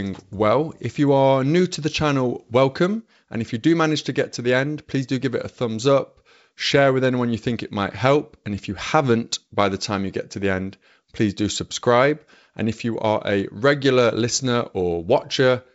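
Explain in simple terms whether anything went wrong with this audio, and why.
Nothing went wrong: the speech has been carried by G.722 wideband telephone coding working as it should, which is why the sound stops at about 7.7 kHz, and the coding leaves at most a faint mark on it.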